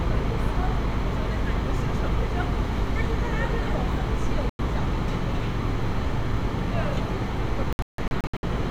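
At 4.50 s the sound drops to silence for about 0.1 s, and from 7.73 to 8.44 s it breaks into several short holes totalling about 0.42 s, the longest 0.16 s. These are digital broadcast dropouts: corrupted frames made the receiver mute until good data returned.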